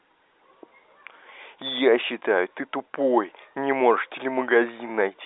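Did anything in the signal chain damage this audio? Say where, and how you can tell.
No, nothing in the chain damaged this audio.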